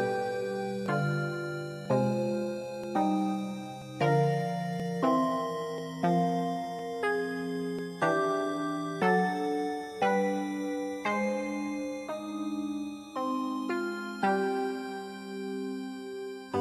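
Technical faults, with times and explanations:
0.86, 1.86, 2.84, 3.82, 4.80, 5.78, 6.79, 7.79 s: overlap between stream segments; at each one-second segment join, 5 to 19 ms of sound is trimmed, so the waveform jumps, causing a regular tiny skip.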